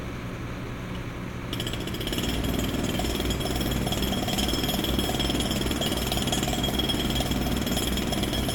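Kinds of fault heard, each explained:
No kinds of fault are heard in this sound.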